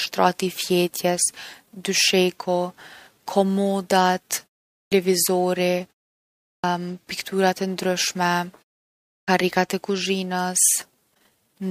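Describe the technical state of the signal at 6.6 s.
Clipped start after a pause, 6.51 to 6.64 s: after a 0.66 s silence the output device wakes late, swallowing 126 ms, so speech begins abruptly.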